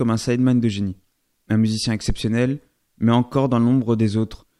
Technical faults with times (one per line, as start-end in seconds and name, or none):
2.10-2.18 phantom power thump